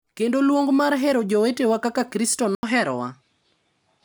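At 2.55 s the speech drops out for 80 ms, then continues with nothing above 11.4 kHz and a new, faint noise floor at the same level, likely an input switched to a poorer device rather than a filter.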